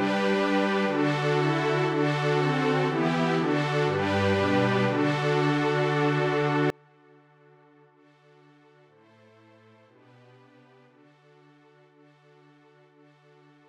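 From 6.70 s to the end at about 14 s, the sound collapses to a faint residue, roughly 33 dB quieter, with centred material almost gone. The likely cause is one channel inverted: with one side's polarity reversed, everything common to both channels cancels when summed to mono, leaving only their difference. A waveform view would show the envelope shrinking abruptly at 6.70 s, and a spectrogram would lose most energy there.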